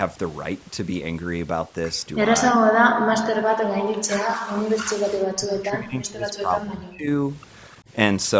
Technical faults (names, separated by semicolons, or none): overdone noise removal; speech suppressed in double talk